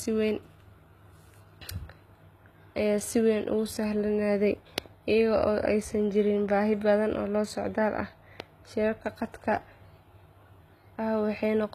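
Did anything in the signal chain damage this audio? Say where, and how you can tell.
Yes, at the codec stage, throughout the speech: s sounds come out gritty and lispy, and nothing reaches above 14.9 kHz. This is likely HE-AAC compression, with treble copied up from lower bands, which fits a low bitrate near 20 kbps. Plain lowpass filtering would dull the treble rather than roughen it.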